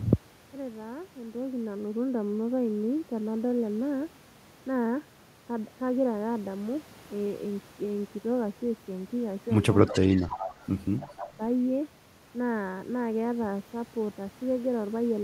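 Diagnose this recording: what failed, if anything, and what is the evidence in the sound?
Speech suppressed in double talk, 9.86–10.53 s and 11.0–11.41 s: the speech dips by about 20 dB, likely because call-processing echo cancellation ducked it during simultaneous talk.

Echo leak, 9.91–10.66 s and 11.17–11.22 s: a copy of the speech delayed by 298 ms returns at about −10 and −25 dB, likely loudspeaker pickup the echo canceller missed.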